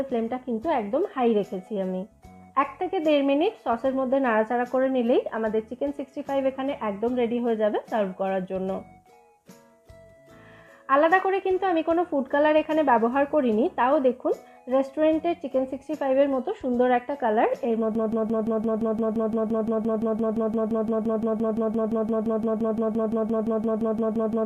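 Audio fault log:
17.95–24.46 s, broken-record loop: a 172 ms slice repeats back to back to the end, likely a stalled player resending its last buffer.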